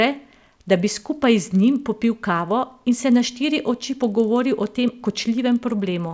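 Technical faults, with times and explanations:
Throughout, resampler restarted on every block: the converter was reset at each 40 ms block, losing its neighbouring samples at every edge, so each boundary carries a small error. The result is a buzzy 25 Hz tick under the speech, from a 24 kHz to 16 kHz conversion.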